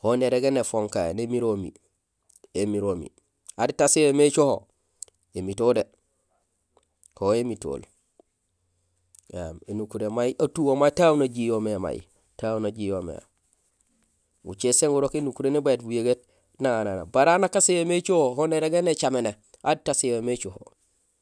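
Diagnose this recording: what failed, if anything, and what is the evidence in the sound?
No faults detected in this recording.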